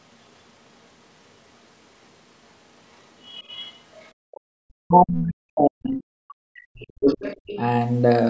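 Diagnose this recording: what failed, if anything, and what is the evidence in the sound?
Other side's voice leaking through at 3.27–3.73 s, 4.0–4.08 s and 7.07–7.58 s, roughly 20 to 40 dB below the talker. It is likely residual echo the call processing's canceller missed, showing as faint extra harmonic traces on a spectrogram.

Speech suppressed in double talk from 4.32 to 7.25 s, dipping as much as about 40 dB. The waveform envelope dips, likely because the echo canceller ducked both voices during overlap.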